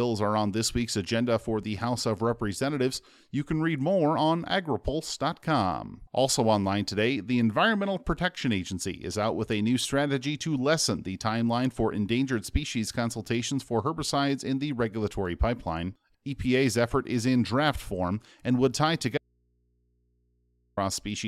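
At 19.18 s, just after "form and would tie", the signal feeding this speech recording likely broke off while the input stage behind it stayed powered, giving an audio dropout to a faint residue. For 1.59 s, until 20.77 s, the speech vanishes abruptly rather than pausing or fading. In its place is only low mains hum from the open input, sitting roughly 45 dB below the normal level, before the speech cuts straight back in.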